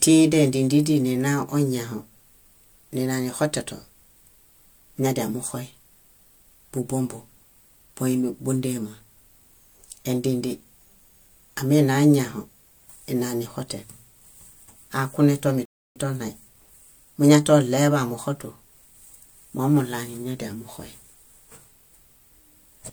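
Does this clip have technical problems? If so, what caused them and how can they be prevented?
Yes: a rebuffering stall at 15.65–15.96 s, where playback drains its downloaded audio, falls silent, then resumes at the same point, adding 0.30 s. A larger playback buffer or a steadier, faster connection would prevent it.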